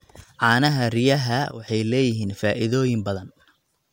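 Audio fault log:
1.51–1.68 s, sudden gain jump: the speech and its background noise drop together by about 11 dB, then snap back, likely from a gain setting applied without a ramp.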